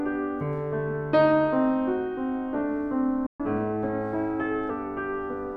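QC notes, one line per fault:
3.26–3.40 s, playback stall: the music cuts to silence for about 130 ms, likely because the player ran out of buffered data, then resumes where it stopped.
3.40–4.70 s, catch-up at higher speed: the backlog is resampled at 1.1x, so tempo rises and pitch lifts about one and a half semitones before settling back.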